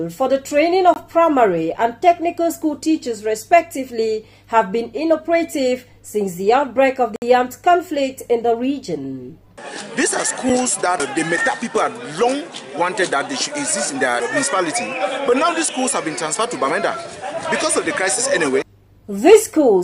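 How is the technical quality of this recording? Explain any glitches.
The recording has three dropouts, each a block of digital silence: at 0.94 to 0.96 s (20 ms), 7.16 to 7.22 s (60 ms) and 10.50 s (about 5 ms). Samples were replaced by zeros, most likely because the output buffer wasn't filled in time. The audio stops and restarts with no fade. The shortest gap is a tick and the longest a brief hole. On a waveform these are near-flat lines. A spectrogram shows blank vertical gaps.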